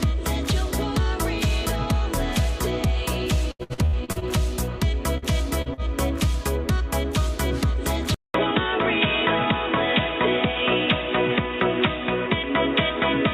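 From 3.51 to 4.25 s there is repeated packet loss, producing a robotic sound. Seven holes, the longest about 78 ms, were each patched by extending the preceding audio, so nearly half of that stretch is synthetic fill. The result is choppy, with fragments missing.

Three short concealed packet losses follow, at 5.18–5.25, 5.62–5.69 and 5.74–5.81 s. Each drops about 40 ms that the decoder bridges by continuing the last sound before blending back in. They come through as brief smears or wobbles.

At 8.14 s a 200 ms silence precedes a sudden change in tone that lasts to the end. Nothing is present above 3.8 kHz, so the sound turns dull and boxy. Level stays about the same, and a new noise floor appears roughly 40 dB below the signal. The likely cause is the input switching to a poorer device.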